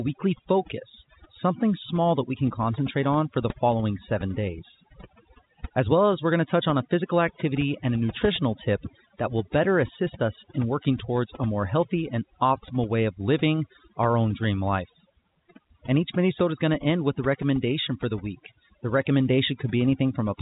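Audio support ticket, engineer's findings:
Overdone noise removal, throughout. Background dropped and broken up into twinkling specks. Denoiser set too aggressive, cutting bands near its noise estimate and taking quiet speech with them. Spectrogram: black gaps, isolated bright dots, ragged harmonics. Band limited near 3.8 kHz, consistent with the G.711 A-law telephone path, which is working as designed.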